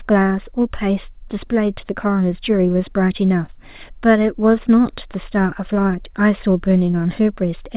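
Short concealed packet loss at 3.46 s: about 20 ms of speech arrived too late, and the receiver bridged the gap by extending the preceding sound, leaving a brief smear.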